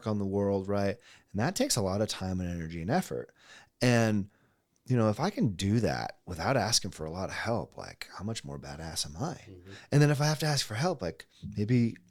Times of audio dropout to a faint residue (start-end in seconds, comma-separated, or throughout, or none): none